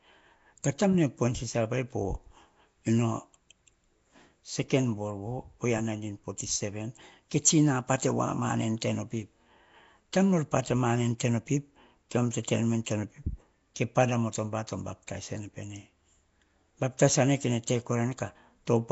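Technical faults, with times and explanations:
throughout Nellymoser compression: likely a Nellymoser Asao encode that gives weak bands no bits and fills them with noise, so speech sounds rough, hissy and underwater, with nothing above 7.7 kHz.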